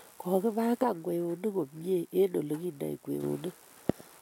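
From 0.83 to 3.23 s the speech falls abruptly by about 6 dB, likely because one channel drops out: a flat step, not a fade.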